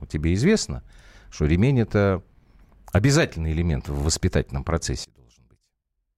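Right after "обязательный элемент в воспитательном", at 5.04 s, the speech nearly vanishes and stays down about 30 dB through to the end of the clip. The likely cause is one channel inverted: with one side's polarity reversed, the material the two channels share cancels when they are summed to mono, leaving only their small mismatch as a quiet residue. On the waveform the envelope collapses abruptly at that point; a spectrogram shows the whole band dropping to a dim trace.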